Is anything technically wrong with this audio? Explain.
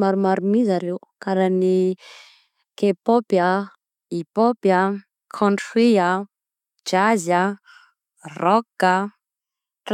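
No, nothing technically wrong turns up here; the speech comes through without any problems worth pointing out.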